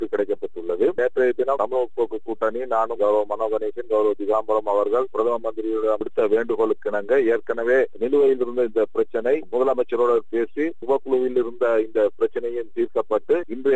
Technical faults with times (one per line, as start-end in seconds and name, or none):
none